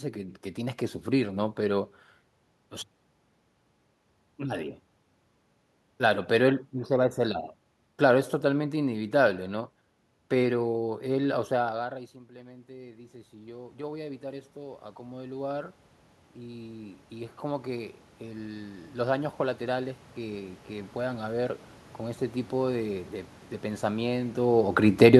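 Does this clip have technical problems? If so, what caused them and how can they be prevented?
Yes. From 11.76 to 15.80 s, the speech and the room noise swell together by about 10 dB. This is automatic gain rising: the talker moved away around 11.5 s, the input dropped about 19 dB, and the control slowly pushed its gain up to compensate. A second automatic gain rise, of about 9 dB, runs from 16.46 to 22.29 s, again lifting the voice and background as one. Fixing the gain, or capping how far and how fast the AGC may boost, would prevent this.

From 24.87 to 25.15 s, the level sinks by about 5 dB, voice and background together. This is automatic gain falling: the control found the input too loud, or its background noise too strong for its gain, and pulled its gain back. A steady microphone distance, or a fixed gain setting, would prevent it.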